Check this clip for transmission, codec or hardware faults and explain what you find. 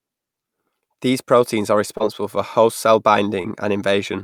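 Two short concealed packet losses are present, at 1.97–2.02 s, between "proteins are" and "for host cell", and at 3.42–3.46 s, just after "for host cell". In each, about 20 ms of audio arrived too late, so the decoder extrapolated roughly 25 ms from the preceding sound, heard as a brief smear or wobble in the speech.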